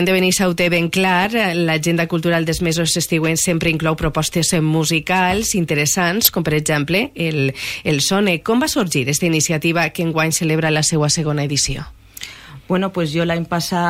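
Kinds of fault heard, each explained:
DAB burbling: A brief burst at 6.25 to 6.29 s, where short blips of noise sit in single frequency bands over the sound. The likely cause is weak reception letting roughly a tenth of a percent of bits slip past error correction into the MP2 audio data.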